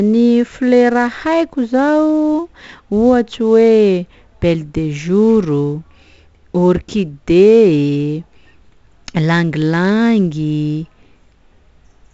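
From start to finish the speech carries heavy 4-bit ADPCM compression. Each sample is coded as a coarse step from a prediction, so a gritty hiss rides on every loud syllable and sinks with the level, with roughness on sharp onsets. Nothing sounds above 7.7 kHz, which fits a 16 kHz rate at about 64 kbps. Unlike a perceptual codec, there is no swirling or warbling, and unlike steady background hiss, the grit tracks the speech.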